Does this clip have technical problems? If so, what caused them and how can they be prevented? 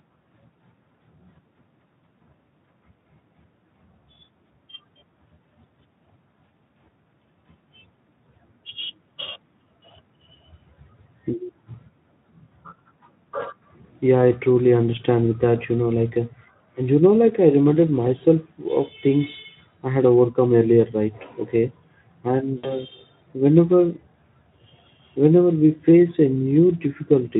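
Yes. VoIP packet loss concealed by the speech codec occurs from 22.57 to 22.83 s. About 60 ms of audio, which fits three lost 20 ms frames, was rebuilt by the Speex decoder from its last pitch and filter. Unlike a hard dropout, there is no silent gap. The speech smears into a buzzy tone or coloured noise that fades, and it stays weak or distorted briefly after packets resume. A jitter buffer, forward error correction or a more reliable network path would prevent it.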